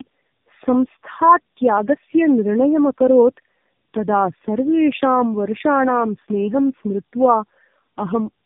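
Throughout the speech, tandem speech coding is audible. The signal was decoded and re-encoded several times, and each pass compounded the previous one's losses. The sound fits three narrowband AMR-NB passes at roughly 7 to 8 kbit/s, linked by plain telephone transcoding. Nothing survives above 3.7 kHz. What separates this from a single low-rate codec or simple band-limiting is the stacked damage: rough, buzzy texture, muffled consonants and a wavering, warbly quality.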